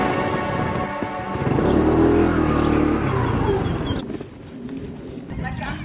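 No technical fault can be heard anywhere in the audio. Nothing in it needs to be flagged or given a time.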